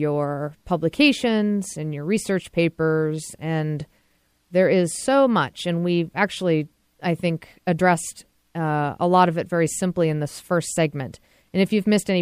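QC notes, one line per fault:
No technical fault is audible in the transfer or processing of the speech signal, which keeps a steady level and unbroken continuity throughout.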